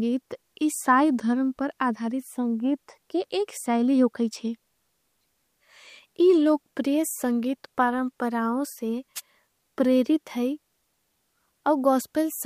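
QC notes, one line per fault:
9.15–9.21 s, wireless microphone noise hit. A brief swish of static is heard. Reflected radio signals cancel, the signal fades, and receiver noise rises.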